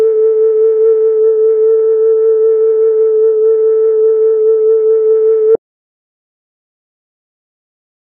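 At 1.15 s the music abruptly loses its treble: nothing remains above about 2.4 kHz, and codec artefacts thicken until 5.14 s. This is an adaptive stream at a lower bitrate, the player switching mid-flow to a leaner encode, roughly a third of the original rate, with no gap at either change.

At 5.55 s the music cuts out to silence, with no room tone, and stays silent to the end of the clip. This audio dropout to silence was likely caused by the input being lost while recording continued writing silence.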